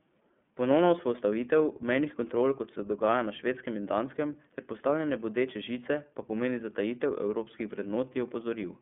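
From start to finish the speech passes through the iLBC codec. Each 30 ms frame's excitation is coded independently of the previous one, and the resulting texture fits the 13.33 kbps mode. The line band runs from roughly 150 Hz to 3.5 kHz, with nothing above 3.7 kHz, so the speech sounds thin and telephone-like, with a plainly audible rough, synthetic grain. On a spectrogram the energy stops sharply at a flat ceiling near 3.7 kHz.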